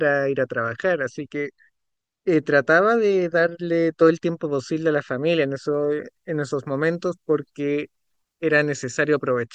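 From 5.74 s to 9.42 s the speech turns thin, bright and hissy, with sibilants spitting forward: pre-emphasis left on. The treble lift, about 8 dB at 10 kHz relative to 1 kHz and consistent with the CD 50/15 µs curve, was never undone by de-emphasis.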